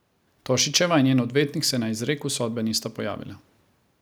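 No technical faults can be heard anywhere in the recording; the signal stays continuous and steady throughout.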